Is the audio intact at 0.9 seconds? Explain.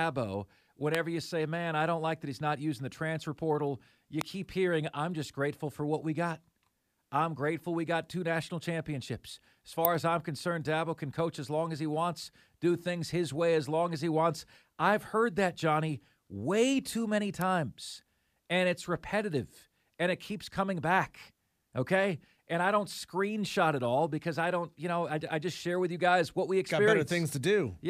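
No. At 0.95 s the line picks up an electrical switching spike, most likely from a nearby switch, motor or static discharge arcing briefly and inducing a burst of energy into the audio wiring. That stray energy rides on top of the speech rather than replacing it, so it is heard as a sharp snap, peaking at about -10 dBFS.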